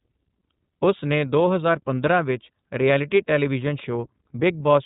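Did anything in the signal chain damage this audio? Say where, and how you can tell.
Yes. The codec stage squeezed the whole speech clip through iLBC, which fits its 13.33 kbps mode with 30 ms frames. Each frame's excitation is coded independently, so voicing sounds plainly rough and synthetic throughout, and nothing above 4 kHz survives, leaving dull, narrowband speech.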